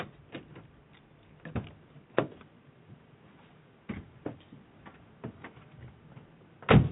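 Nothing technical seems to go wrong in this short recording of sounds; there's no problem to point to anywhere in it.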